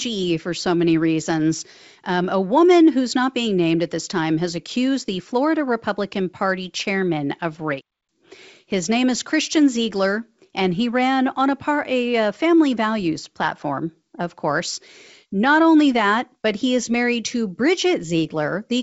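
No audible faults in this clip.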